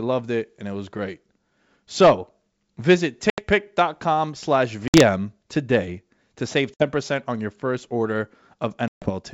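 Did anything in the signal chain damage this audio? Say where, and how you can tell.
Yes. Packet loss on an ADPCM call, at the network stage, hits the speech at 3.30 to 3.42 s, 4.88 to 5.02 s, 6.74 to 6.85 s and 8.88 to 9.10 s. Each has a hard-edged silent gap, 80, 60, 60 and 140 ms long, which points to a handful of lost packets each time. After every hole the speech comes back with brief slight distortion. That happens because the decoder's adaptive predictor and step size lost step with the sender and need tens of milliseconds to re-converge. The G.722 wideband coding itself stays clear up to 7 kHz.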